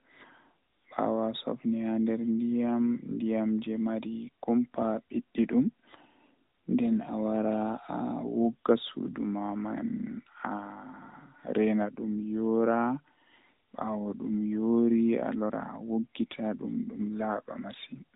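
A speech clip carrying AMR narrowband mobile codec damage from start to finish. Nothing passes above about 3.8 kHz, so the sound is thin and muffled. The buzzy, synthetic edge is plainly audible and fits a higher-rate AMR-NB mode around 10.2 kbps.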